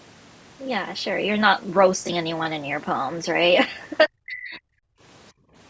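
From 4.06 to 4.66 s the talker's level collapses by roughly 40 dB in pieces, likely speech suppressed in double talk, showing as a notched, thinned waveform and faded spectrogram. Background gated by the echo canceller follows at 4.94–5.01 s (about 28 dB) and 5.32–5.55 s (about 21 dB), with the room tone briefly dropping out. On the waveform these appear as short flat gaps in the noise floor.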